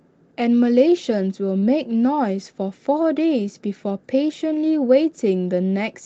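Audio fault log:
0.87, 1.03–1.05, 1.11–1.22 and 1.62–1.64 s, lost packet rebuilt from error correction: four packets failed to arrive, but each following packet carried a low-bitrate backup copy that the Opus decoder played instead. Each patch covers about 20 ms, so nothing drops out. The audio in those spots turns briefly coarser and grainier, because the backup is coded far more crudely than the surrounding audio, which stays band-limited at 8 kHz throughout.
1.60–1.64 s, short concealed packet loss: 20 ms of audio missed its playout deadline. The receiver bridged the hole with about 21 ms of synthesised sound extrapolated from what came just before, then crossfaded back into the real signal. The result is a quick smeared or wobbly blip rather than silence. Overlapping its tail, the packet rebuilt at 1.62 s adds some roughness as the audio settles.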